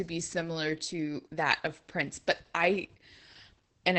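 The speech is heavily damaged by Opus voice compression throughout. It sounds muffled, hoarse and slightly robotic, with nothing above about 8 kHz. This points to the SILK coder at roughly 10 kbps.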